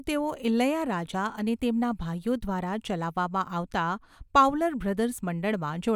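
A speech recording, and nothing is technically wrong with it.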